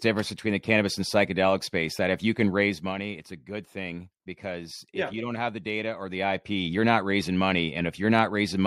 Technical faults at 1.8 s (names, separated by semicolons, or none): none